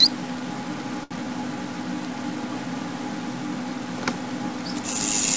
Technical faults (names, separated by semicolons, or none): short stall from a late packet